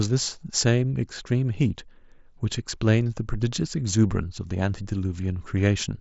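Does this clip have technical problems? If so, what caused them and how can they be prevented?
No, the speech has no technical problems, so there is nothing to prevent. It carries the sound of a Bluetooth mSBC headset codec, with nothing above about 7.7 kHz and a light graininess from the codec.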